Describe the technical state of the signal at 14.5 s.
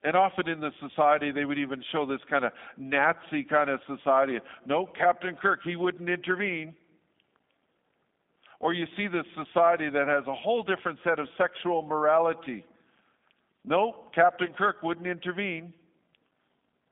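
At 14.46 to 14.52 s, VoIP packet loss concealed by the speech codec: the decoder extrapolates its last pitch and filter into a fading buzzy or noisy tail, seen as smeared, decaying energy, consistent with one lost 20 ms packet.

Underneath, the G.729 codec is audible as rough, synthetic speech, with the spectrogram showing energy confined to roughly 200 Hz to 3.6 kHz.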